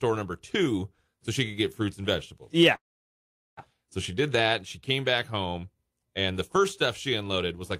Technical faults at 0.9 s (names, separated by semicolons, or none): none